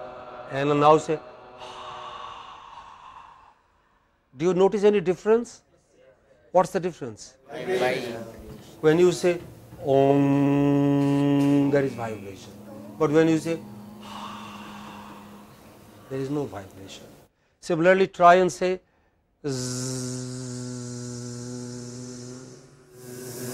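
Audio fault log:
No technical faults are audible, and the signal stays continuous across the whole recording.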